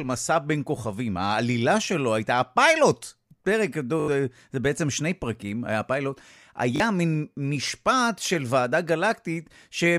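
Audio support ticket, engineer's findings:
Short buzzy stutter at 4.0–4.08 s, one slice played five times with hard joins; again at 6.76–6.8 s, three passes. Repeated buffer: playback starved and replayed its last block, which fits a 20 ms buffer. Around 70 ms and 40 ms of sound skipped.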